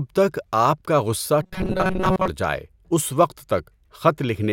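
From 1.42 to 2.28 s, robotic sound from repeated short buffers: a 188 Hz buzz, likely a looped 5 ms block, showing roughly repeating waveform cycles and flat spectrogram harmonics.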